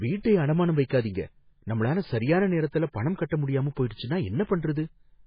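Throughout, the speech sounds watery and swirly, with nothing above about 5 kHz, so the treble is dull and sibilants are thin and metallic. Faint detail flickers in and out from moment to moment. This is heavy MP3 compression, likely at a very low bitrate around 16 kbps. Starved of bits, the encoder cuts the top at a fixed frequency and drops weak frequency lines frame by frame.

Pre-echo appears three times. At 0.85 to 0.90 s, just after "வீட்டை அடமானம்", a 55 ms hiss runs ahead of an attack. Shorter smears follow at 3.89 s, lasting about 14 ms, and at 4.43 to 4.47 s, lasting 38 ms. Each onset sounds soft and blurred. The codec spreads quantisation noise across a whole block, so noise sized for the loud attack leaks into the quiet moment before it.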